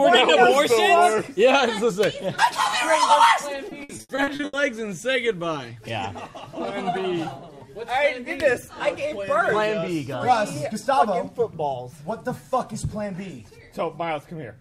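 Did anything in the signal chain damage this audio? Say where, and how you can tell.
Yes. The network stage shows repeated packet loss (robotic sound) from 3.69 to 4.55 s. Packets went missing or arrived too late again and again, and the receiver patched each hole by extending the last sound it had. Across those 0.86 s there are about nine gaps, the longest about 80 ms, and roughly 380 ms, about 44% of the stretch, is filled-in material. The result is choppy audio built from repeated fragments, with pieces missing.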